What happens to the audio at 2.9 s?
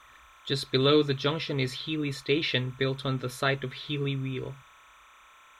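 At 2.9 s, as throughout, timecode bleed from an adjacent 29.97-frame linear timecode signal leaks in, a chirping warble near 1 and 2 kHz sitting well below the speech.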